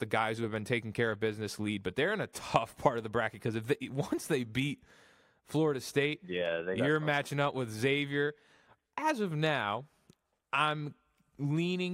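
No technical faults are audible anywhere in the speech recording.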